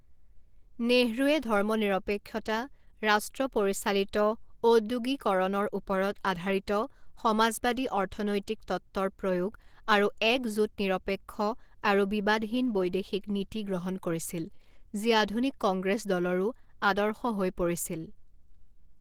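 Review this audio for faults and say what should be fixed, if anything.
The whole clip, start to finish, has plainly audible codec damage: the speech comes across muffled and hoarse, with a grainy, rough texture where the detail should be. That's likely Opus compression running at a low bitrate, something in the region of 16 kbps, where the encoder drops into its hybrid speech mode and spends too few bits on the upper bands, so they're rebuilt coarsely instead of carried faithfully. Next time, encode from the original at a higher Opus bitrate, or keep a lossless copy for anything that needs editing.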